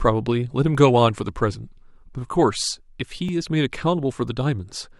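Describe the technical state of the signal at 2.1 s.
At 2.1 s the signal sits inside a run of periodic USB or driver dropouts spanning 1.29 to 4.28 s. Roughly every second, a blocked bus or driver drops about 2 ms of speech outright, leaving a handful of evenly spaced ticks.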